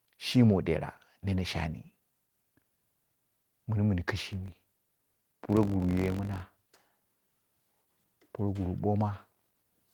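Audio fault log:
4.27–6.73 s, filter restarted on every block: for about 2.5 seconds a filter loses its memory at each block boundary and restarts from silence, so each block opens with a small transient. These ticks recur at 46.9 Hz, which fits a 1024-sample block at 48 kHz, and merge into a low buzz that swells and fades with the speech level. A spectrogram shows evenly spaced vertical streaks. The waveform shows a small step about every 21 ms.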